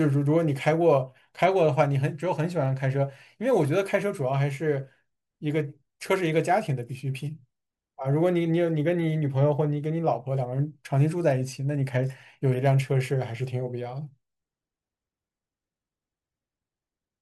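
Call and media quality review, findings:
No audible faults found.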